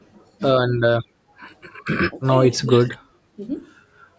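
A speech recording with three kinds of call-processing fault. From 0.00 to 0.06 s, a very faint delayed copy of the voice, trailing by 358 ms, is likely an echo leak from a far-end loudspeaker the echo canceller did not fully remove. From 1.20 to 1.33 s the room background dips by about 11 dB for roughly a tenth of a second: background gated by the echo canceller, which turned the microphone down while the loudspeaker played. At 2.67 to 3.01 s and 3.36 to 3.42 s the voice drops by roughly 15 dB and 10 dB, which points to speech suppressed in double talk, with the canceller attenuating the talker while the other side was also speaking. The call microphone processing leaves nothing above 8 kHz.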